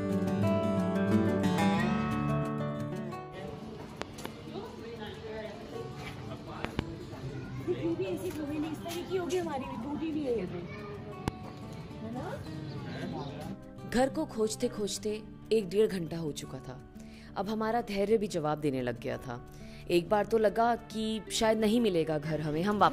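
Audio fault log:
4.02–4.28 s, 6.65–6.81 s and 11.28–11.30 s: loud pop. There is a double pop in each of the first two spans and a single pop in the third, each standing roughly 20 dB above the surrounding sound, which continues underneath. A sudden voltage step or pulse, likely from a plug, a switch, static or a driver glitch, was added to the signal. On a waveform each pop is a tall, narrow spike, and on a spectrogram a thin vertical broadband stripe.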